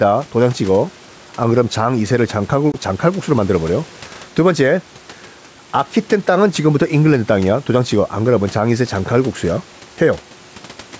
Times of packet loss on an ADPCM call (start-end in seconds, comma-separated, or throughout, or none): 2.72-2.79